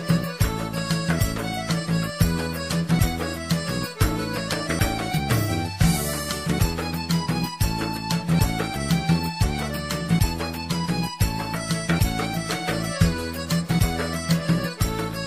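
Audio missing between chunks at 1.19, 2.99, 4.79, 6.59, 8.39, 11.99 and 13.79 s: the sound jumps abruptly, with roughly a fifth of a second gone each time and the two sides butted together. The likely cause is a recorder working in 2-second chunks that drops audio at each handover.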